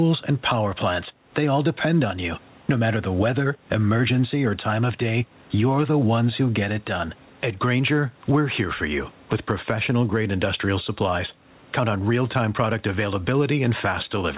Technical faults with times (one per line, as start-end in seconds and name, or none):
0.00-14.37 gain pumping